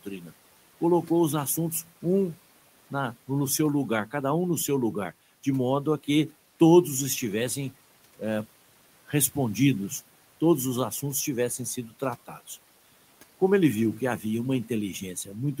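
Speech, with speech cut by the noise suppressor between 0.04 and 0.32 s: quiet parts are pulled down by about 10 dB, roughly a tenth of a second in all, sounding swallowed rather than silent. Unlike a dropout, the sound fades instead of vanishing, with the room noise (about 24 dB below speech) dipping alongside it.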